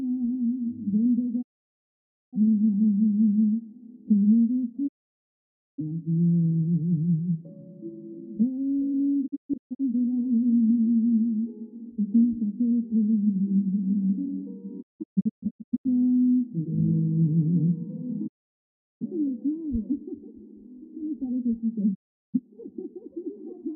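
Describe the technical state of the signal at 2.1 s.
A digital broadcast dropout runs from 1.41 to 2.38 s, so at 2.1 s the signal is silent. The receiver stopped getting valid frames and muted, fading out over 20 ms; roughly 0.9 s of the sound is simply missing before audio resumes.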